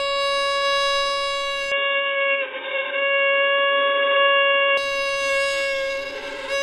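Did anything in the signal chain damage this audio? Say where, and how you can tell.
Yes. The input switched to a poorer device from 1.72 to 4.77 s, likely a capture-device change at the driver stage: everything above 3.8 kHz vanishes, and the level shifts by about 5 dB.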